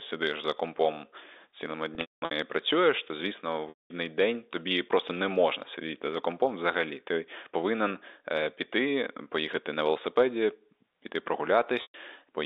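Speech over a telephone line, band-limited to roughly 300 Hz to 3.7 kHz as G.711 coding gives. It has three dropouts from packet loss with pitch repetition: 1.95 to 2.31 s (scattered, longest run 210 ms), 3.69 to 3.90 s, and 11.82 to 11.94 s. The receiver repeats the last pitch period, giving a brief buzzy hold. It fades over about 50 ms, so the longer gaps drop to silence.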